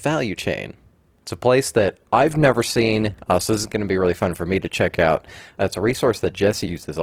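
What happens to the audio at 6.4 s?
At 6.4 s you're still inside a stretch where the adaptive stream has dropped to a lower bitrate. It switched abruptly at 1.77 s, right after "a place", and stays down through the end. Codec artefacts rise, which fits a fall from roughly 64 to 16 kbit/s Opus.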